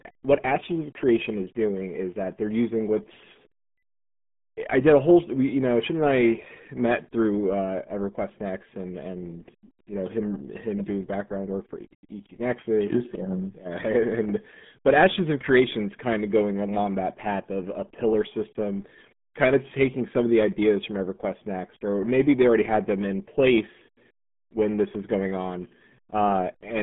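RealAudio 14.4 codec damage runs through the whole clip. The speech is squeezed into a band of roughly 200 Hz to 3.4 kHz, with nothing above 3.6 kHz, and heavy coding leaves it muffled and gargly, which points to an 8 kbit/s dial-up-era stream.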